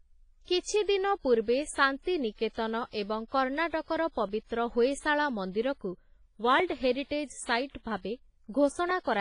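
A low-bitrate transform codec, likely WMA compression, has coarsely quantised the whole speech recording, zeroing weak spectral lines and cutting everything above about 10.4 kHz, which fits a rate near 24 kbps. The damage is heavy: ringing, washy tone with hiss that breathes with the voice.

From 1.98 s to 8.91 s, two devices running on separate clocks that disagree by a few hundred parts per million let their shared buffer drift until a few dozen samples slip. These clock drift buffer slips are likely behind the regular clicks heard about four times, every 2.31 s.

Between 3.28 s and 3.32 s, an attack falls late in a transform block, so quantisation noise sized for the loud onset is spread into the quiet moment before it. This pre-echo shows up as about 40 ms of hiss ahead of the attack, which sounds soft and smeared.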